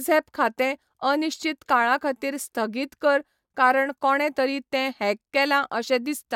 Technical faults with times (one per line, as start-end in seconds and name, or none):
none